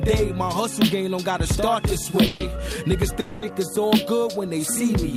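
At 2.26 s and again at 3.20 s there is a call audio freeze. The last sound stretches into a fading buzz or hiss for 0.14 s, then 0.22 s. The likely cause is a drained jitter buffer. The audio resumes where it stopped, with nothing lost, just later.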